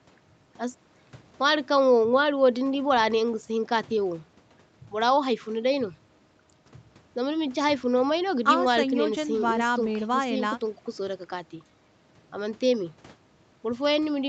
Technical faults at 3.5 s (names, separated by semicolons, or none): jitter buffer speed-up